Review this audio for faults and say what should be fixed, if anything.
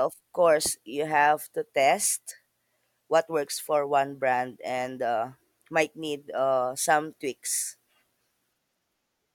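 Nothing should be fixed, because the review finds no faults in this audio.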